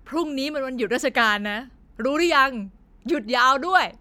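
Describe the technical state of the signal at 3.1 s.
At 3.1 s the speech signal is intact, with no audible technical fault at that moment.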